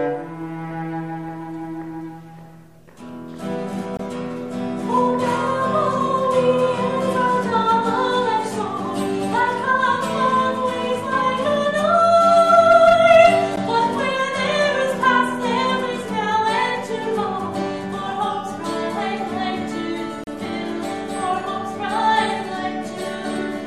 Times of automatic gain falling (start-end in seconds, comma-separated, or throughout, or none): none